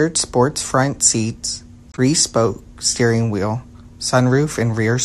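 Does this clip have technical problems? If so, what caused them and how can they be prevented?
Yes: just after "sports front seats", from 1.92 to 1.99 s, a corrupt frame was concealed by the AAC decoder, whose length fits about three damaged frames. Protecting the stream with error checking or retransmission would prevent it.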